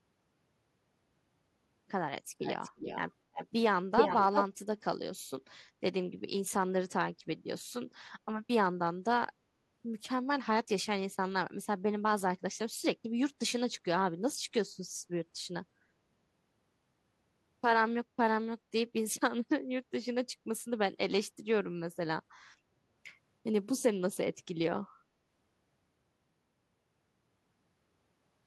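Speech, with a delayed copy of the talker trailing the voice by 344 ms from 2.4 to 3.1 s, 3.33 to 3.48 s and 3.96 to 4.45 s, just after the fade-in. The copy sits about 10 dB down at first, then turns louder than the speech itself. This echo leak likely comes from a far-end speakerphone whose echo canceller let its own microphone pickup pass back.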